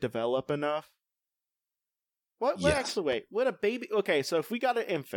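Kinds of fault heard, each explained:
Loud pop: a sudden voltage pulse, likely from a plug, switch, static discharge or driver glitch, entered the signal path and was shaped by the circuits after it. It is heard as one sharp pop from 3.12 to 3.15 s, peaking somewhat above the speech, which continues underneath.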